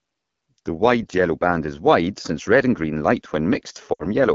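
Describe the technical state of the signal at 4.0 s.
At 4.0 s the speech sits inside a burst of lost AMR speech frames running from 3.93 to 4.06 s. About 60 ms of audio, which fits three 20 ms frames, failed to arrive intact. The decoder repeated the last good pitch and vocal tract settings at falling gain, so the sound drops to near silence within two frames before the voice returns briefly weak or rough. On a waveform the envelope decays over near-identical repeating cycles. A spectrogram shows frozen harmonics dimming out.

Underneath, the whole clip carries the AMR wideband (HD Voice) codec at 8.85 kbit/s, one of its two lowest rates. The voice sounds plainly rough and raspy. The spectrogram shows coded detail only up to 6.4 kHz, with a band of diffuse, structureless noise filling 6.4 to 7 kHz and nothing above.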